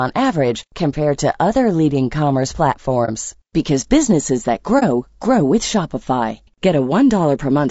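Throughout, the speech sounds rough and grainy with plainly audible coding damage, likely from low-delay AAC compression such as AAC-ELD, fitting a bitrate around 32 kbps. At 3.05 to 3.10 s, after "to other leading commerce", and again at 4.79 to 4.83 s, after "because businesses that", there is a brief dip of about 30 ms, consistent with AAC frame loss with muting. Each time, the decoder zeroed one frame's spectrum, and the overlapping windows fade the sound out and back in.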